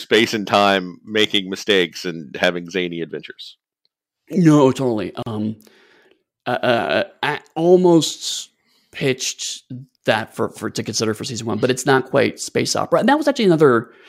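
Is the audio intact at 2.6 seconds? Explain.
Yes, the speech at 2.6 seconds plays through intact, with no fault at that moment.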